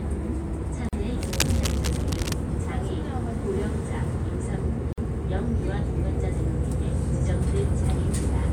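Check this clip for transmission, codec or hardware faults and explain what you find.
Two kinds of fault are present: gaps at the joins of encoded pieces, and a burst of cable scratch noise.

From 0.89 to 0.93 s, and again from 4.93 to 4.98 s, the sound drops into silence for about 40 ms and then 49 ms before resuming where it stopped. The edges are smeared. These are gaps at the joins of encoded pieces, recurring every 4 s, where separately encoded segments were joined without trimming the encoder's start-up delay and end padding.

From 1.21 to 2.33 s a dense, uneven scratching and rustling runs over the sound at about 10 dB below it. This is cable scratch noise, likely from a worn cable, connector or control being moved so that its contact resistance fluctuated rapidly.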